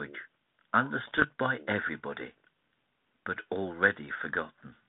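From 1.04 to 1.25 s, bit errors on an ADPCM link, roughly one percent, jolt the decoder's step size into ringing pops and level jumps, not the silent gaps of packet loss.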